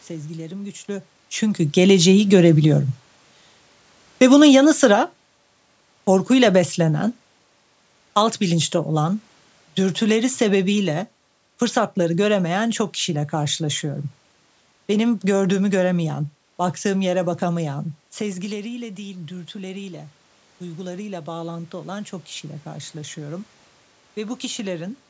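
Automatic gain rising, from 0.85 to 2.33 s: just after the talker moves away from the microphone at around half a second, the gain control raises its level by about 5 dB. Voice and room noise swell together over roughly a second and a half.

Automatic gain falling, from 4.13 to 12.63 s: the control judges the input too loud, or its background noise too strong, and slowly lowers its gain by about 7 dB. The voice starts loud, then sinks over more than eight seconds, with its background sinking alongside it.

Automatic gain rising returns from 18.27 to 25.05 s. The talker moves around 18 s and the input drops by about 14 dB. The control then climbs back by about 9 dB, and voice and background noise grow louder together across the final seven seconds.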